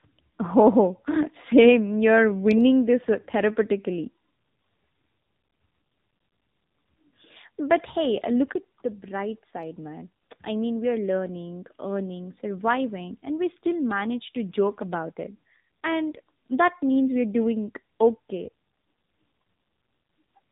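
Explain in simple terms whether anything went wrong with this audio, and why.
Two things went wrong. The whole recording suffers from tandem speech coding. The speech was squeezed by one phone-network codec, unpacked, then squeezed again by another. Each pass damaged the result further. So it sounds rough, muffled and warbly, with nothing above 3.8 kHz.

Right after "hey look", at 8.53 s, there is a brief gap of about 20 ms. From there to the end, the sound gets quieter and carries a faint new background noise. This is likely an input switched to a poorer device, such as another microphone or a headset.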